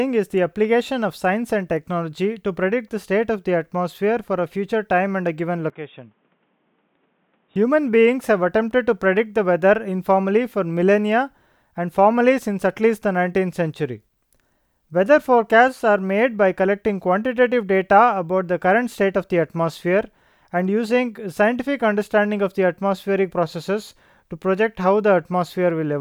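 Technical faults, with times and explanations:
5.70 to 7.56 s, input switched to a poorer device: the speech abruptly turns duller and boxier, with nothing above 3.8 kHz, drops by around 10 dB, and takes on a new noise floor roughly 40 dB below the signal, then clears again at 7.56 s, with no silence at either switch. A different microphone or a headset call profile was likely swapped in. A bandwidth cut alone would not also change the level and background noise all at once.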